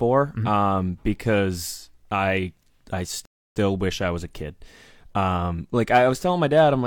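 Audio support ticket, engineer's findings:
Rebuffering stall, 3.25 to 3.56 s, after "because I I", before "wish I was a". Player buffer ran dry and playback halted until data arrived. Clean gap of about 0.3 s: flat waveform, empty spectrogram band. Speech resumes exactly where it stopped. Nothing missing, time added.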